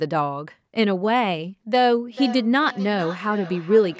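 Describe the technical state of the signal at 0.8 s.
At 0.8 s the speech is intact, with only the normal band-limiting of call microphone processing, which leaves nothing above 8 kHz and trims the lowest bass.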